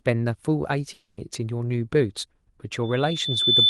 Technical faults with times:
0.93-1.19 long network dropout
2.83-3.69 loudspeaker feedback squeal

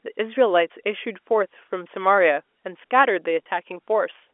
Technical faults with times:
none

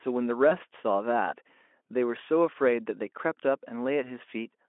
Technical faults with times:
0.49-0.54 VoIP packet loss concealed by the speech codec

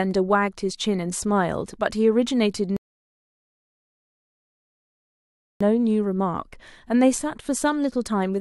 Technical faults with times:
2.77-5.61 rebuffering stall

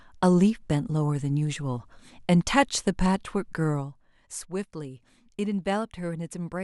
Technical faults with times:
none

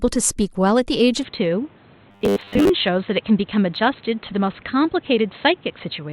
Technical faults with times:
1.23-6.13 input switched to a poorer device
2.11-2.69 robotic sound from repeated short buffers

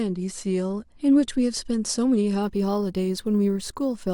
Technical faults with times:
2.43-4.13 crude rate conversion

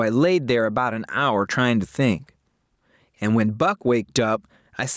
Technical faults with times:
0.00-4.97 gain pumping

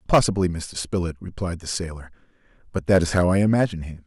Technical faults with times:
0.14-0.29 hard clipping
2.90-3.64 hard clipping

